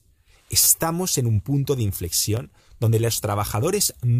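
Speech with two repeated-buffer stutters. At 0.64 to 0.67 s, just before "en un punto de", a 10 ms piece sounds four times with hard joins. At 2.37 s, before "donde los", one piece repeats once. Late audio made the device replay its last buffer, which fits a 10 ms buffer.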